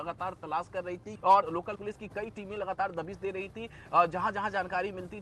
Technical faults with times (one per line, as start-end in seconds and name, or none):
1.15-1.17 skip ahead
1.27-3.26 jitter buffer speed-up